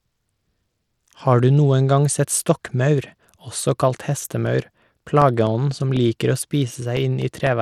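From the start, the speech carries plainly audible codec damage, likely from Bluetooth SBC compression. SBC splits the sound into sub-bands and quantises them coarsely with no hearing model. The grain fits a rate near 96 kbps. Content reaches about 20.2 kHz.

At 3.97 s, just after "gang sett stokkmaur også", periodic USB or driver dropouts begin and run to 7.47 s. Every 0.25 s, about a millisecond of audio is lost and replaced by silence. A blocked bus or driver causes this. It gives roughly fifteen evenly spaced ticks.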